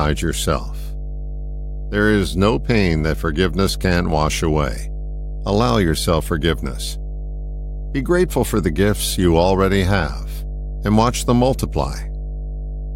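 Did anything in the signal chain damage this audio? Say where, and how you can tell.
Yes. Mains hum gets in at the analogue wiring stage, probably through a ground loop or a nearby transformer. A strong, steady 50 Hz tone sits only about 10 dB below the speech throughout. A spectrogram would show unbroken horizontal lines at 50 Hz and its low harmonics, and the waveform would show a regular ripple that persists through the pauses.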